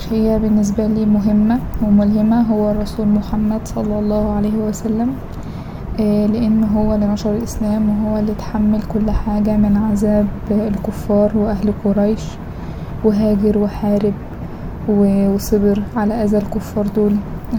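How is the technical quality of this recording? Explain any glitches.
No glitches or technical faults are audible anywhere in the recording.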